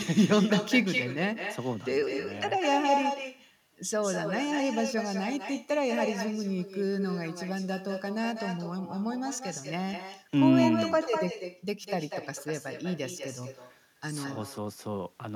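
Echo with no canceller runs throughout: the far end's loudspeaker feeds its microphone unchecked, so each phrase returns about a fifth of a second later, only about 6 dB quieter and thin.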